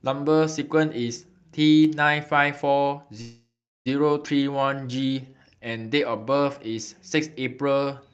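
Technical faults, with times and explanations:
1.85 s and 6.79 s, dropped samples: each is a single sharp click where the waveform jumps straight to a later value. The gap is a fraction of a millisecond, far too short to lose any audible sound, and is likely due to samples missing from the stream.
3.21–3.88 s, call audio freeze: the sound stalls and the last fragment is stretched into a fading buzz or hiss, then goes silent for about 0.33 s before resuming where it stopped. This is likely an emptied jitter buffer waiting for delayed packets, adding 643 ms with nothing lost.
4.24–4.26 s, skip ahead: playback jumps forward with only a 7 ms join, so roughly 0.3 s of audio is simply absent and the two sides butt together. Later packets were already waiting, so a stretch dropped on the way or by an overflowing jitter buffer was skipped over.
4.37–6.60 s, jitter buffer slow-down: the audio runs at 88% speed at unchanged pitch, sounding drawn out. 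The receiver repeated single pitch periods and pause fragments to rebuild its reserve, adding 270 ms over the stretch.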